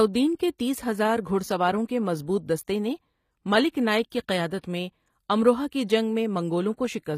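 All the way through, the treble sounds rebuilt rather than real, with gritty, lispy s sounds and nothing above about 15.5 kHz, likely HE-AAC compression at a low bitrate near 24 kbps.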